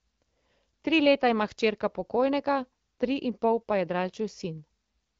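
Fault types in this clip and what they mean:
No faults can be heard in this speech. It comes through the AMR wideband (HD Voice) codec at 12.65 kbit/s, which keeps the speech clear, leaves only light coding traces, and tops out around 7 kHz, with the band above 6.4 kHz filled by shaped noise rather than coded detail.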